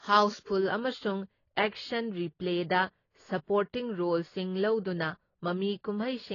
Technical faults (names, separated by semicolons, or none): AAC compression; channel delay (comb filtering)